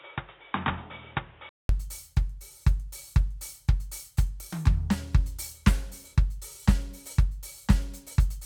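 From 0 to 1.69 s the music sounds boxy, with nothing above 3.8 kHz, a few dB quieter and noisier, likely an input switched to a poorer device, which the 200 ms gap at the switch distinguishes from simple filtering.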